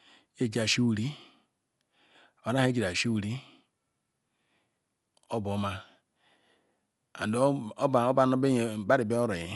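Dolby Digital compression, likely the cause, runs through the whole clip. Nothing reaches above 11.5 kHz, so the speech sounds dull, and a rough, fluttering noise clings to it where the coder filled starved frequency lines with noise, which fits a low bitrate near 64 kbps.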